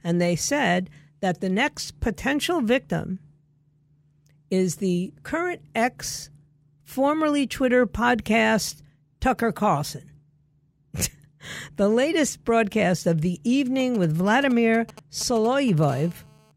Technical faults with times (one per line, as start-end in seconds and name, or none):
13.80-15.85 GSM signalling bursts
15.88-16.52 GSM phone buzz